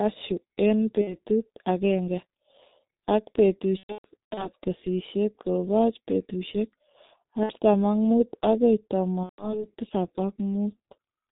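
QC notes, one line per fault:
throughout, G.723.1 codec: the speech is muffled and hoarse from start to finish, with blurred consonants. Nothing above 4 kHz gets through, and a voice model refreshed only every 30 ms frame at roughly 6.3 kbit/s smears fast articulation. Because the damage is even across the whole clip and never comes and goes, it is a coding limit and not a transmission fault.
1.01–1.18 s, 3.77–4.50 s, 7.43–7.52 s, 9.23–9.66 s, VoIP packet loss concealed by the speech codec: at each of these points the speech stretches into a buzzy tone or coloured noise that fades. The decoder keeps repeating its last pitch and filter at falling gain, and the voice stays weak until the next frames rebuild it. The 3.77–4.50 s stretch, before "kesisyet kobooch peetuusyek", breaks up in scattered gaps, which suggests many separate frames lost over about 600 ms. The brief gap before "ak muut agoi" fits a loss of about two frames, and the one just after it about five. 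Unlike the steady codec muffling, these faults are local and decaying.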